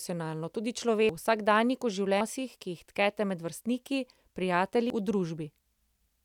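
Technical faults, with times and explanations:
1.09, 2.21 and 4.90 s: compressed frames skipped. The speech jumps ahead by roughly 0.3, 0.5 and 0.3 s as several whole frames go unplayed. The jumps fit frames of about 93 ms.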